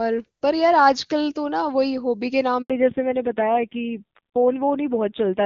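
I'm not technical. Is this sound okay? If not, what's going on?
No, there are two problems, both around the middle of this speech clip.

A handover gap starts at 2.62 s and lasts 80 milliseconds, until 2.70 s. The phone was moving the call from one network connection to another, and during that switch no sound got through. The speech fades out almost instantly, goes silent for that short moment, and comes back once the new link is running. Anything said in that brief slice is simply gone.

Fallback to narrowband follows from 2.70 s to the end. Before the switch, the call ran on HD Voice and sounded full and clear. After it, the call dropped to an older, lower-quality phone format that cuts off everything above 4 kHz. That removes the crisp upper part of the sound, so from this point the speech comes across duller, more muffled and somewhat rougher, like an old-fashioned phone line.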